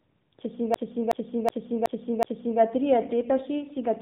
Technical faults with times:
0.00-4.01 AMR narrowband mobile codec
0.74-2.60 system hang loop

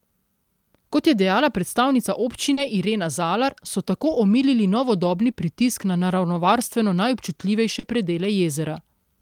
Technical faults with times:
2.53-2.59 short concealed packet loss
2.57-2.59 lost packet rebuilt from error correction
5.31-5.35 short concealed packet loss
6.47-6.49 lost packet rebuilt from error correction
7.79-7.85 short concealed packet loss
7.83-7.89 lost packet rebuilt from error correction

